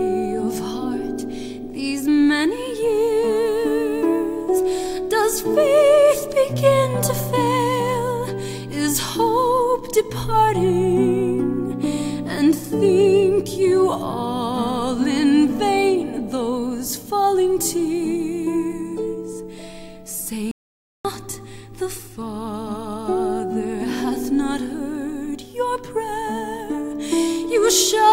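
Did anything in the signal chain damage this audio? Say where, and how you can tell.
Yes: an audio dropout to silence, 20.51 to 21.05 s, leaves dead silence with no room tone, likely a lost input connection while recording continued.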